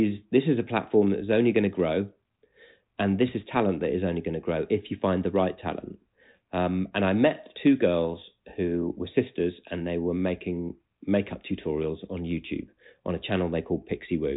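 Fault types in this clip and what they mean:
No faults can be heard in this speech recording.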